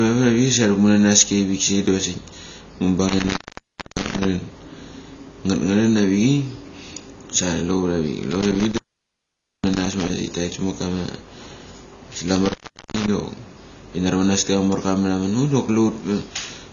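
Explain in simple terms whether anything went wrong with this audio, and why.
AAC compression throughout: the speech sounds dull and smeared, with nothing above 7 kHz, likely from saving it in a low-quality format that discards detail.

Intermittent contact at 3.08 to 4.25 s, 8.31 to 10.10 s and 12.36 to 13.08 s: a loose connection briefly opens, cutting the sound for about 0.61, 0.86 and 0.40 s, with crackle at each edge.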